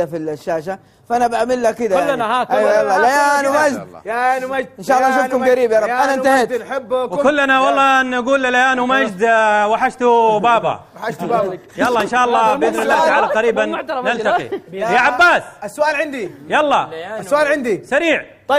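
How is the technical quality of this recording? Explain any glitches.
No glitches to point out here; the recording runs without any dropouts, clicks, stutters or other hiccups worth explaining.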